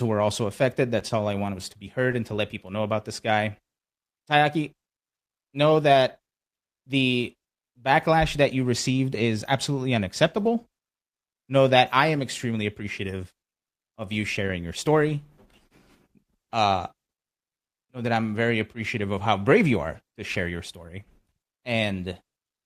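A packet arrived late in this speech recording, leaving the jitter buffer empty for a moment and producing a short stall from a late packet between 1.08 and 1.12 s. The receiver bridged the gap by stretching the last bit of sound for about 15 ms, then resumed exactly where it stopped, so nothing is lost. What you hear is one sound held slightly too long, with a faint buzz or dip, and everything after it runs 15 ms later.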